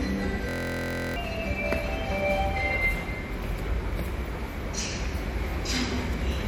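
A watery, swirly texture runs throughout, with nothing above 19.9 kHz, likely MP3 compression at a bitrate that fits 64 kbps, plainly audible.

From 0.49 to 1.16 s a steady buzz at 43.1 Hz replaces the sound: a system hang loop, one 23.22 ms slice repeating, which fits a 1024-sample buffer, so about 0.7 s is lost.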